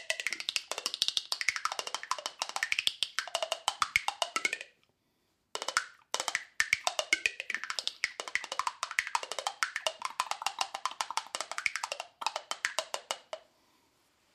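From 7.92 to 9.24 s the audio turns slightly dull from channel delay (comb filtering): one channel lags by roughly a single sample, so mono summing cancels the top end toward a notch near 20 kHz. A spectrogram shows the highest band fading; the waveform barely changes.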